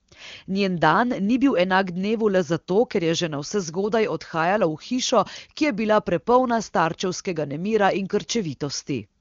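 No technical faults can be heard in this speech.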